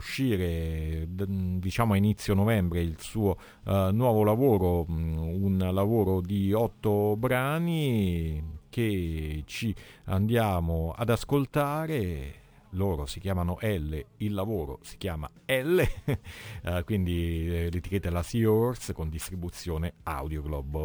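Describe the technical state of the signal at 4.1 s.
A bright metallic fizz between 12 and 24 kHz, about 28 dB below the sound, runs through 4.1 s and the whole clip. This is imaging from sample-and-hold upsampling: each sample was repeated to go from 24 to 48 kHz without a smoothing filter.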